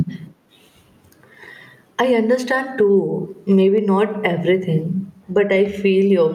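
Gain pumping runs through the whole speech clip. The level swings by around 15 dB, most likely from input gain set far too high while a fast limiter clamps down on peaks, flattening dynamics into a squashed sound.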